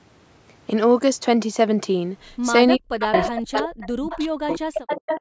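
A speech recording with two kinds of call-processing fault. The first is speech suppressed in double talk, from 2.77 to 3.13 s and again from 3.3 s to the end. The level drops by as much as about 40 dB for roughly 400 ms and then 1.5 s in total, so the talker fades and breaks into fragments. The likely cause is an echo canceller turning everything down while both ends speak. On a waveform this shows as the envelope collapsing into gaps and thin slivers. On a spectrogram the harmonics and upper bands vanish in blocks, even though the band still reaches 8 kHz wherever speech survives. The second fault is echo leak. A copy of the speech returns 369 ms late from 3.04 to 3.6 s at roughly the same loudness as the talker. It then comes back in short scraps at 3.81–3.87, 4.1–4.22 and 4.5–4.58 s, and in a longer stretch from 4.74 to 5.18 s, at about 10 to 25 dB below the speech. The likely source is a loudspeaker on one side of the call whose canceller lets part of the microphone pickup through. 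A spectrogram shows duplicates of earlier harmonic patterns shifted about 0.37 s to the right.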